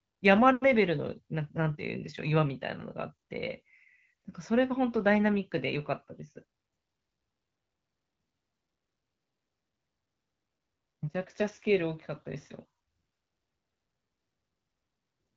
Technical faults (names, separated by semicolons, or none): none